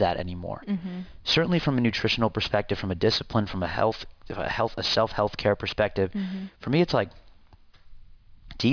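Aliasing runs throughout the clip. The speech was resampled down without a low-pass filter first, which fits a drop to about 11 kHz, so energy above 5.5 kHz folds back below it. Sibilants turn gritty and metallic, with false tones roughly 15 dB under the speech.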